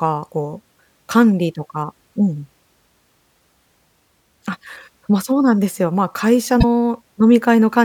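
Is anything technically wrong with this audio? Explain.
Yes. From 6.60 to 6.64 s the speech jumps forward with a brief glitch, lasting about 44 ms. The likely cause is a broken MP3 bit reservoir. After frames went missing, the next frame reached back for borrowed data and decoded bytes from the wrong frame, with MP3 frames of roughly 26 ms. On a spectrogram it shows as a short break in the pattern of the speech. In the waveform there is a discontinuity.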